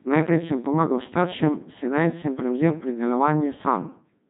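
The whole speech clip runs through a Codec 2 vocoder. Only pitch, voicing, energy and a coarse spectral shape survive. The decoder rebuilds the voice from sine waves, so it sounds robotic and buzzy. The damage is heavy and fits a 2.4 kbit/s mode. Nothing remains above 3.8 kHz.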